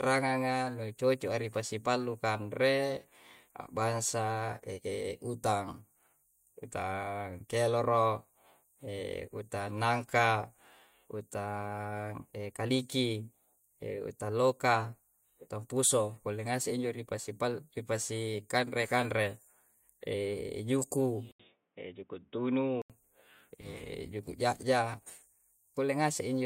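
A speech recording in which the input most likely switched to a poorer device between 21.32 and 22.90 s. After an 80 ms silence at the switch, the band stops near 3.8 kHz, making the sound dull and boxy, with a faint new noise floor and a roughly unchanged level.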